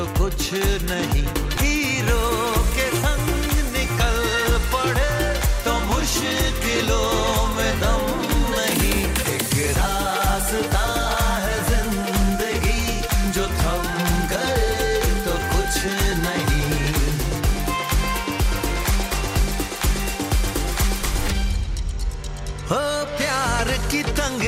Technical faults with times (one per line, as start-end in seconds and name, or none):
1.56 lost LE Audio frames